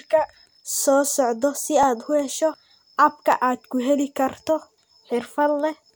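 Two devices in the chain are likely running on independent clocks that disagree by something on the order of 500 ppm, so the buffer between them drifts until a small block of a few dozen samples is dropped or repeated. These clock drift buffer slips recur steadily every 1.49 s, about four times between 0.34 and 4.82 s, each heard as a brief click or tick cutting into the speech at a regular beat.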